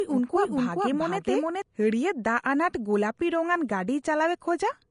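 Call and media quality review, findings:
Hissy, grainy treble with nothing above 10.6 kHz, throughout. Likely Vorbis compression: coarse residue quantisation turning detail to noise, fits roughly 36 kbps.

Doubled audio track from 0 to 1.62 s, already running at start: equal-level copy trailing by around 0.4 s, cuts off abruptly. Likely a second, slower capture path.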